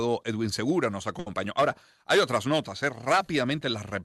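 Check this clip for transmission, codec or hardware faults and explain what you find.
One transmission fault stands out. From 1.19 to 1.28 s there is a short stall from a late packet. A packet missed its playout time and the jitter buffer ran dry, so the receiver stretched the last sound for 70 ms until the packet arrived. The speech briefly holds with a slight buzz or dip, then carries on 70 ms late, with nothing lost. The call codec's top end stops near 12 kHz, which fits Opus at around 64 kbps.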